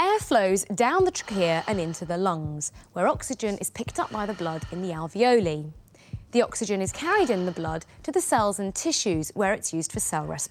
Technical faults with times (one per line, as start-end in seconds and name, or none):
none